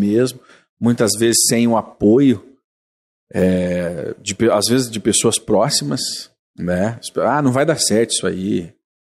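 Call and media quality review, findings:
No audible faults found in this speech recording.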